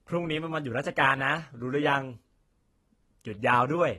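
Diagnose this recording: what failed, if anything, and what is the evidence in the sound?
AAC compression, throughout the speech, at the codec stage: the audio has nothing above 12.1 kHz and plainly audible coding damage, dull and smeared. The likely cause is AAC-LC quantising each frame's spectrum too coarsely, consistent with roughly 32 kbps, and discarding the top band.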